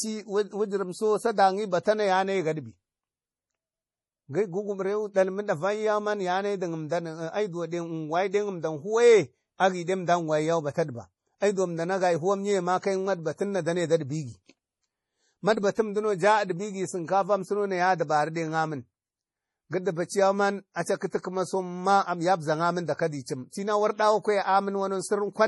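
MP3 compression, throughout the speech: the treble stops at about 11.5 kHz, and the heavy watery, swirling texture is likely from an MP3 encoder starved of bits, which fits a rate near 32 kbps, so it cuts the top band and lets weak frequency lines flicker between frames.

Pre-echo at 1.83 to 1.86 s before "na yanayi", at 15.75 to 15.77 s, and at 23.50 to 23.53 s before "tinau ardawa": the block's quantisation noise spills 22 to 34 ms ahead of each sharp onset, heard as a brief hiss that leaves the attack soft and smeared.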